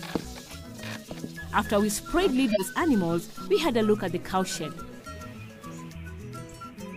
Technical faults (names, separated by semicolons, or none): corrupt frame decoded